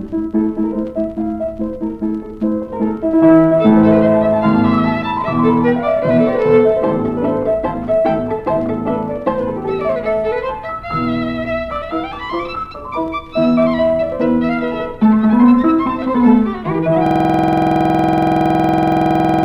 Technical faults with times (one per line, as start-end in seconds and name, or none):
17.06-19.45 system hang loop